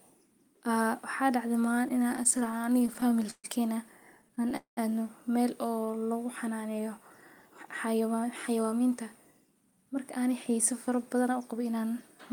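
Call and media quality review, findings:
Repeated stalls (stutter), 1.75–3.46 s. Sound drags and hiccups, 23 short gaps. Jitter buffer repeatedly running empty on late packets; receiver extends last sound. 343 ms filled, longest gap 132 ms, about a fifth of the span. Nothing lost.

Repeated stalls (stutter), 4.22–4.53 s. Milder: 5 brief gaps, longest 14 ms, 49 ms filled. Same jitter-buffer underrun pattern. Nothing dropped.

Call audio freeze, 4.57–4.79 s, just before "aadnu meel". Sound holds as a fading buzz, then 110 ms of silence. Likely jitter buffer underrun on held-up packets. 203 ms inserted, delay up 203 ms. Resumes where it stopped.

Jitter buffer speed-up, 7.86–11.74 s. Sound runs about 7% fast at unchanged pitch, noticeably hurried. Receiver trimming short pitch-period pieces to shed built-up buffer delay. Roughly 0.3 s removed across the span.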